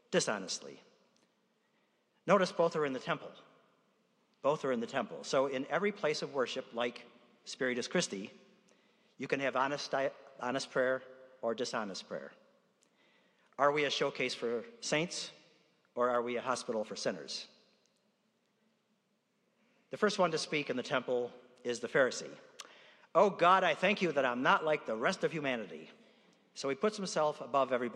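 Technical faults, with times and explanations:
0.59–26.94 s, clock slip clicks: faint regular ticks roughly once a second, about twenty in all, each a single dropped or repeated sample. The likely cause is two unsynchronised clocks drifting apart by around 20 ppm, slipping whenever the offset reaches a whole sample.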